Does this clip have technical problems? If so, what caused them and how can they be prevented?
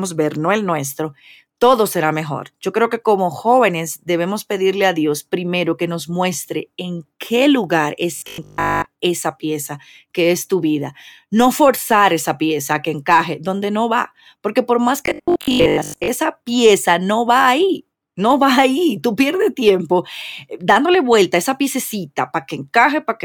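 Yes. Audio likely reached the playback side too seldom, so the software kept looping its most recent short buffer while newer audio was skipped: robotic sound from repeated short buffers. The looping imposes a fixed 50 Hz buzz, which fits a repeated segment of about 20 ms, and turns the speech rigid and metallic from 8.16 to 8.86 s, after "muestre en qué lugar", and from 15.06 to 16.08 s, after "va porque por más". A larger jitter buffer and steadier network or processor delivery would prevent it.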